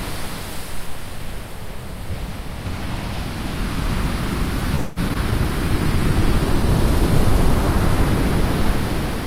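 At 4.75 to 5.00 s, packets were most likely held up in transit, and the jitter buffer ran dry. The call audio freeze stretches the last sound into a fading buzz or hiss for about 0.21 s before playback resumes where it left off.

Between 5.09 and 5.13 s and again between 5.14 and 5.18 s, about 40 ms of audio each time failed to reach the decoder. Short concealed packet loss patches each gap with a brief continuation of the preceding sound, heard as a quick smear or wobble.

At 5.31 to 5.34 s, a stretch of audio was dropped, and playback skips ahead by roughly 70 ms, joining the two sides almost directly.

From 5.59 to 6.79 s, the bandwidth estimate collapsed, and the encoder fell from 64 to 17 kbps for about 1.1 s. The call bitrate drop makes the sound coarse, watery and dulled in the highs until it recovers.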